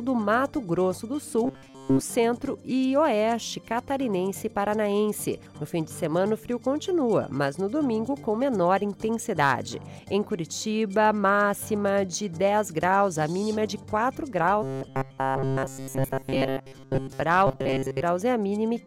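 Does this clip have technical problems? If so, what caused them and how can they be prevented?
Yes. Robotic sound from repeated short buffers occurs at 1.45–2.01 s, 14.63–17.22 s and 17.47–18.02 s. A rigid 134 Hz buzz is imposed on the sound, likely from about 7.5 ms of audio looping when new data arrived too late. Larger, steadier buffering and reliable data delivery prevent it.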